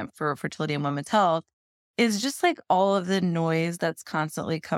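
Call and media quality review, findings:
No faults found in the speech recording. Nothing audible warrants a ticket entry.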